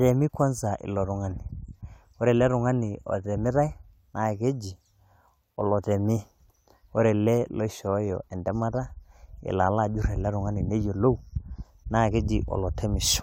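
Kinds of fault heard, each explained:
No faults can be heard anywhere in this recording.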